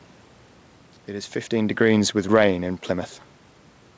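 A speech clip with no technical faults to report.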